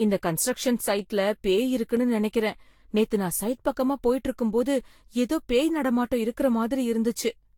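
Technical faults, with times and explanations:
Throughout, generation loss: swirly, smeared, hollow speech with blurred attacks and nothing above 19.4 kHz, likely from around seven lossy re-encodes, each adding fresh quantisation noise.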